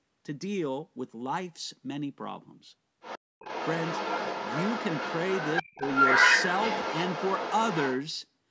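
A speech recording with the far end of a call bleeding into it. The other side's voice leaking through appears first as a brief scrap from 3.0 to 3.19 s, about 10 dB below the talker, then returns at 3.39 s and continues to 8.01 s at roughly the same level as the talker's speech. That persistent second voice points to the loudspeaker output reaching the microphone and an echo canceller that likely failed to subtract it, so the residual rides along with the wanted signal for most of the clip. Within that stretch, from 5.62 to 5.81 s, the talker's own speech is suppressed in double talk: it dips sharply, by about 30 dB at its deepest, affecting about a tenth of a second in total. The pattern fits the canceller failing to separate near-end speech from the overlapping echo and attenuating both together. The call's microphone processing, with its band limit leaving nothing above 8 kHz, sits underneath all of this.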